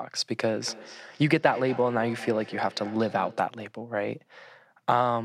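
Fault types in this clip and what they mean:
Feedback echo between two devices: From 0.46 s to 3.61 s the speech is trailed by a faint, ringing copy that returns at a steady interval of around 200 ms, peaking at about 17 dB below the speech itself. This happens when a second device in the same room plays the call aloud and the first microphone picks it up again, sending it back round. Each device's echo canceller only removes its own playback, so this loop goes uncorrected.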